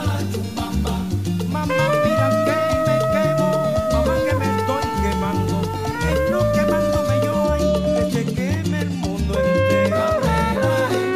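From 0.0 to 7.43 s the audio has low bit depth without dither: a grainy, signal-following distortion at roughly -30 dB below the level, likely from truncation to about 6 bits. The waveform shows visible staircase steps, and the spectrogram shows broadband hash that rises and falls with the sound.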